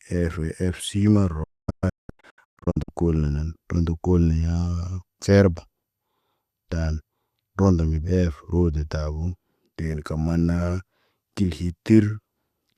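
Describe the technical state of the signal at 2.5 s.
At 2.5 s the signal is inside a digital broadcast dropout (1.43–2.89 s): failed frames mute the receiver, leaving scattered holes up to 240 ms long with 8 ms fades.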